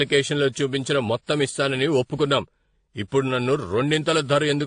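Throughout the speech, the top end stops dead at 9.7 kHz, and two kinds of coding smear overlap. This points to transcoding between lossy codecs, likely a low-bitrate AAC pass re-encoded as WMA, with the second codec spending bits on the first one's artefacts.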